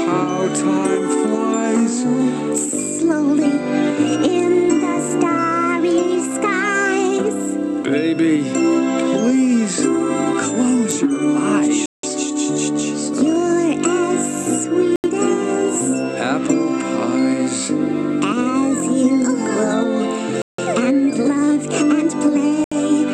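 The sound drops to silence four times: at 11.86 s for 175 ms, 14.96 s for 81 ms, 20.42 s for 166 ms, and 22.64 s for 74 ms. Each gap then resumes. These are likely Bluetooth stalls, where delayed packets left the receiver's buffer empty.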